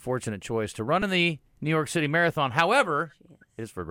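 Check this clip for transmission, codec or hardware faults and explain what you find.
There's a repeated buffer fault, twice: at 1.02 s, right after "choice to run", and again at 2.36 s. The playback device ran short of fresh audio and replayed its last 2.9 ms chunk twice more, which fits a 128-sample buffer. Pieces that tiny come out as a quick click or buzz, and a few milliseconds of real audio go missing.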